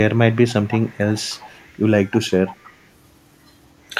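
From 0.34 to 0.98 s, 1.16 to 1.82 s, 2.1 to 2.28 s and 2.48 to 2.87 s, a faint copy of the speech trails 313 ms behind. This echo leak is likely from a far-end loudspeaker the echo canceller failed to fully cancel. It shows on a spectrogram as a weaker, shifted duplicate of the speech harmonics. At 3.87 to 3.92 s, speech suppressed in double talk produces a brief, sharp dip of roughly 15 dB. The echo canceller likely ducked the talker while both sides spoke, leaving a narrow notch in the waveform envelope.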